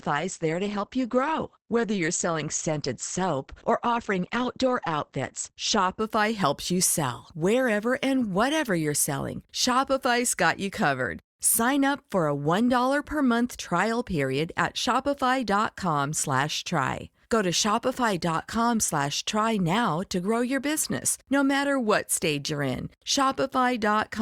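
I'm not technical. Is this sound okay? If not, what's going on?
No. Adaptive stream starting at a low bitrate, 0 to 6.0 s: the player opened on a muffled, lower-quality version, then jumped to a clearer one before "helps you sell".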